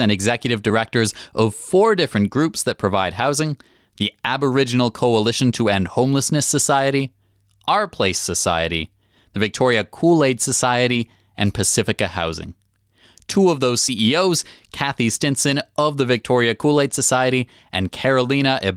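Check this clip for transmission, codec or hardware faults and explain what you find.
There's one transmission fault in this speech clip. At 10.93 to 10.99 s there's a lost packet rebuilt from error correction: about 40 ms, which fits a couple of lost packets, got filled from the low-bitrate backup copies carried in the following packets. So no gap, just a brief rougher, noisier patch.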